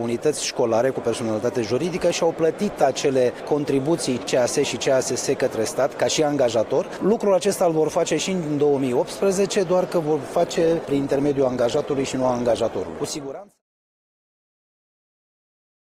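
At 10.24 s codec artefacts suddenly rise and last to the end, without any gap. This is an adaptive stream at a lower bitrate, consistent with a drop from 64 to 16 kbit/s Opus, while the smooth fade-out runs from around 12.5 s to 13.62 s.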